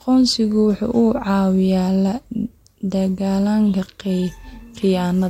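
No technical faults can be heard anywhere in the recording.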